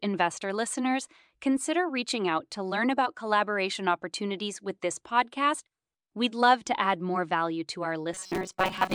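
At 8.14 s, just after "add more value to", the speech turns into robotic sound from repeated short buffers. It lasts until the end of the clip. The voice becomes a rigid, metallic buzz at 188 Hz. The words are still roughly traceable underneath. The likely cause is audio arriving too slowly, so playback keeps repeating a fragment of about 5.3 ms. Most of this stretch is made of those repeats, and the real audio between them is lost.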